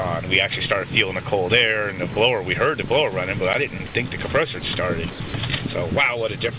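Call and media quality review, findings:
Sound dropped by the voice detector. Brief steady noise replaces the sound at 2.12 s, 2.88 s, 3.78 s, 3.88 s, 4.6 s, 5.12 s and 5.28 s, for 20 to 80 ms each. Likely cause: the sender's detector misread quiet sound as background. The receiver filled the gaps with comfort noise.

Block of digital silence at 3.53 s. Hard cut out for about 11 ms. Likely playback buffer not filled in time. The length fits a 512-sample buffer. The band above 4 kHz is missing throughout, as expected for the G.711 call path.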